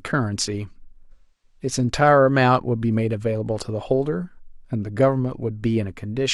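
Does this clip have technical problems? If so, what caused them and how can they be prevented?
Yes. AAC frame loss with concealment affects the speech from 1.12 to 1.59 s. About 0.3 s of coded audio never reached the decoder, which fits a run of roughly seven AAC frames. The decoder covered the hole by reusing the last good spectrum with altered phase and estimated energy, so that stretch sounds smeared and noisy rather than clean. Protecting the stream with forward error correction, retransmission or a larger jitter buffer would prevent such dropouts.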